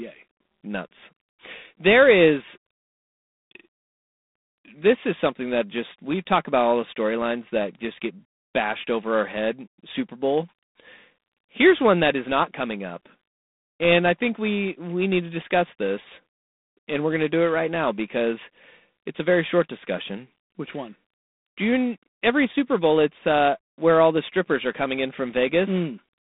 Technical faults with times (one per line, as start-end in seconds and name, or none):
0.00-26.23 G.726 ADPCM